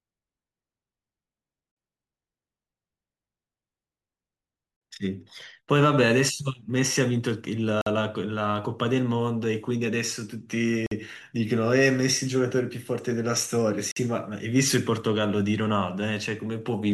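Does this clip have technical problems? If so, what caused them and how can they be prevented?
Yes, there's a gap between chunks: clean 50 ms holes at 4.76–4.81, 7.81–7.86, 10.86–10.91 and 13.91–13.96 s, one every 3 seconds, where the speech pauses and resumes intact at each join. Making playback or stitching start every chunk seamlessly, without padding, prevents it.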